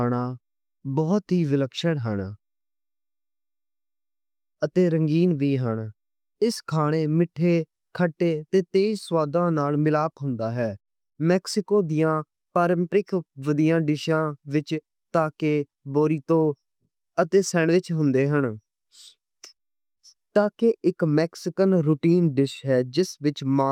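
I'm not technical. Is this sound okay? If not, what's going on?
Yes, it sounds fine; nothing is wrong with it.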